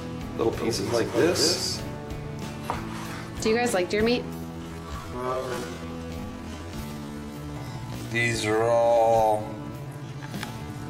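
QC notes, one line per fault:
0.35–1.97 s, doubled audio track: a second full-band copy of the sound trails the original by roughly 200 ms at about 5 dB lower, with no decay or room colour, starting and stopping abruptly. This likely comes from a second, slower capture path being mixed in.
4.28 s to the end, time-stretched section: the pace drops abruptly to about 0.52 times normal speed while pitch holds steady, so the audio drags. This is likely software stretching that repeats short pieces of the sound to fill a longer length.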